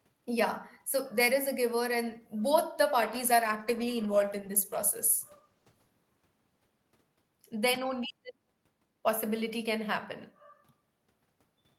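From 3.03 to 6.01 s the speech turns coarse and muffled: a call bitrate drop, with the encoder falling from 32 to 15 kbps.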